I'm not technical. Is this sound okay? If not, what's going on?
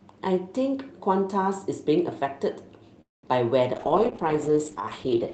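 No. From 3.01 to 3.28 s there is a call audio freeze: the sound briefly buzzes, then drops to near silence for about a fifth of a second, and resumes where it stopped. Unlike a dropout, nothing is lost. This is likely from delayed network packets.

From 3.75 s to the end there is a call bitrate drop: the speech turns rough and muffled as the call sends far less data. Unlike a freeze, it keeps playing without any pause. It just sounds worse until the end.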